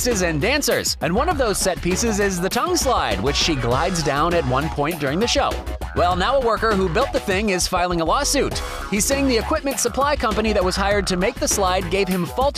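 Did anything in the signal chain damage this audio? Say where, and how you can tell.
No, nothing in the signal chain audibly damaged this audio. No stage of the chain leaves a mark that can be heard anywhere in the clip.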